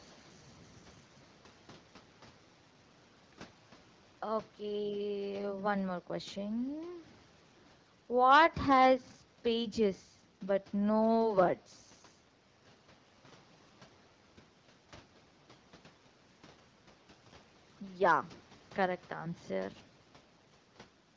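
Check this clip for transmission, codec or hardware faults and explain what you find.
Nothing in this speech amounts to a fault; it carries the band-limited sound of call microphone processing, with no content above 8 kHz, and the light coding of the AMR wideband (HD Voice) codec at 12.65 kbit/s, a rate at which speech stays clear.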